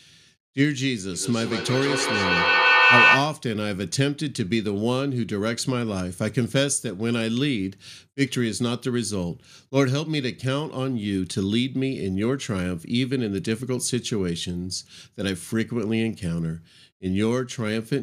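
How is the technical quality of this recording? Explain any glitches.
The recording has one clear glitch, a feedback echo between two devices, from 1.13 to 3.44 s. A second device in the room replays this microphone's signal, which is picked up again, so each sound returns roughly every 150 ms, thinner and ringing, building to about 7 dB above the speech.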